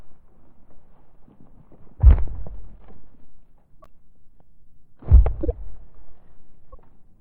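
Throughout the clip the sound is watery and swirly. The treble is cut off, and faint detail flickers in and out. Sharp onsets come out smeared. This is most likely MP3 compression at a low bitrate, around 64 kbps. With so few bits, the encoder drops the top band and zeroes weak frequency lines. Those lines come and go from frame to frame, and that gives the swirling.

A corrupt frame is decoded at 2.78 s. It is a faint glitch. Another follows from 3.81 to 3.87 s, also faint. In each, flipped bits in a compressed frame were played anyway. Wrong gains and misread codes put energy at the wrong frequencies. The worst comes from 5.43 to 5.54 s: a loud glitch spread across several frames. At 6.73 to 6.75 s a single damaged frame gives a moderate glitch.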